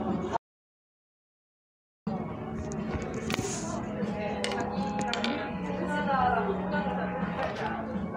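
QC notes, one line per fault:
0.37–2.07 s: audio dropout to silence. The sound cuts out for about 1.7 s into silence with no room tone, likely a lost input while recording continued.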